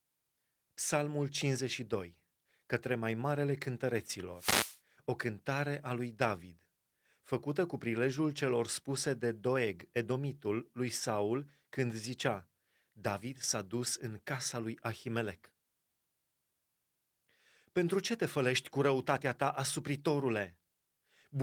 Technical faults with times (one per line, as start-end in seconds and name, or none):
4.34-4.80 wireless microphone noise hit